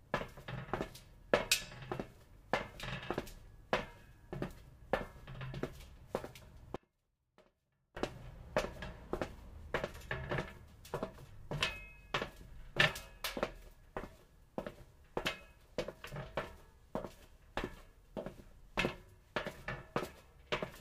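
At 6.76 s the sound cuts out abruptly and returns at 7.97 s, an audio dropout to a faint residue lasting about 1.2 s. Only a faint leak of the signal, roughly 30 dB down, remains, likely from a brief loss of the source while the downstream path stayed live.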